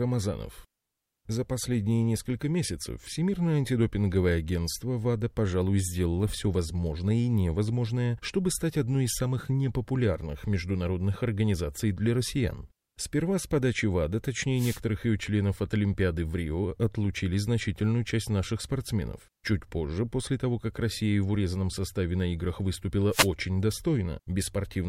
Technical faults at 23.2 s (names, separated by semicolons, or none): wireless microphone noise hit